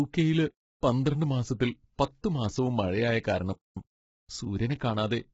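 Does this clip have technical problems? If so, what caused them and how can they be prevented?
Yes. Throughout the speech the voice sounds rough and grainy, with noise filling the gaps between harmonics and nothing above 7.7 kHz. The damage is heavy, and the likely cause is low-delay AAC compression (AAC-ELD, the codec of video calls) at a bitrate that fits about 16 kbps. Too few bits are shared among several hundred frequency lines per frame, so fine detail is lost. To prevent it, raise the call's bitrate or use a wideband codec setting.

At 3.23 s a short burst of hiss leads into a sharp attack, which sounds softened. This is pre-echo. The codec spreads its quantisation noise evenly across a block, so noise sized for the loud onset also fills the quiet 16 ms just before it. The onset lands late in the block, so that noise is heard ahead of the attack. To prevent it, use higher bitrates or a codec with shorter blocks or temporal noise shaping.

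From 3.53 to 3.77 s the audio stops dead in mid-flow for 234 ms and then resumes. This is a playback stall, likely caused by the player running out of buffered data or its thread being blocked, so the output stayed silent until it recovered. To prevent it, use larger playback buffers and keep audio processing on a high-priority thread.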